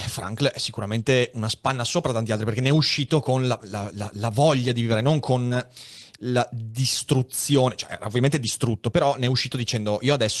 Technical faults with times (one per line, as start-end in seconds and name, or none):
5.47-5.54 short concealed packet loss